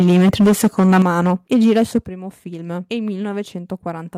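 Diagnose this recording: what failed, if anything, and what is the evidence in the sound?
Microphone overload, at the converter stage: from 0.0 to 1.98 s the loudest syllables carry a harsh, crackling edge, with peaks pushed about 11 dB past full scale and a substantial share of samples flattened. Excessive microphone input gain is the likely cause, driving the converter into hard clipping.

Microphone volume stepped down, in call processing: the level drops abruptly three times, by about 2 dB at 0.02 s, about 8 dB at 1.02 s and about 9 dB at 2.04 s. Automatic gain control reacting to the clipped peaks is the likely cause, cutting the device's input volume in discrete steps.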